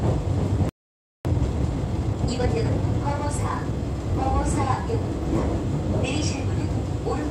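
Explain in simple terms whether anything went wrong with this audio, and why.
Two things went wrong here. At 0.69 s the sound just cuts out and stays silent until 1.25 s, about half a second. That's a playback stall, most likely the player running dry of data or getting stuck for a moment before it picked back up.

Right after, from 1.25 to 4.25 s, everything plays about 1.15 times too fast but at its normal pitch. That's time-compressed catch-up: the player trims and blends tiny bits to make up the lost time.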